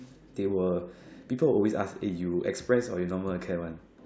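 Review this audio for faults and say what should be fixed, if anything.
No faults turn up in this audio, so nothing needs to be fixed.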